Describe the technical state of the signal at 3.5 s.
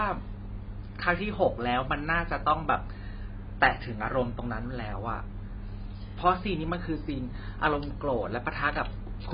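At 3.5 s the speech carries what is likely AAC compression, which runs through the whole clip rather than starting or stopping there. The encoder has discarded everything above 5 kHz and coarsely quantised the remaining frequency bands, which fits a low bitrate around 16 kbps. The damage is heavy: the sound is dull and smeared, with a warbling, fizzy texture on sustained sounds and sibilants.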